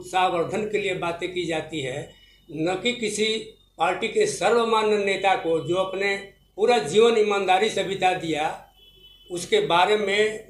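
Nothing stood out as a technical fault anywhere in this recording.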